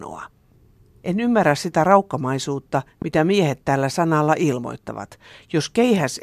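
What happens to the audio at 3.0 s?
At 3.02 s a single loud pop cuts in and is gone by 3.04 s, peaking a few dB above the speech. It's likely a voltage spike from a switch, plug or static hitting the line and getting rounded off by the circuitry downstream. You hear a sharp, brief thump riding on top while the talking carries on underneath.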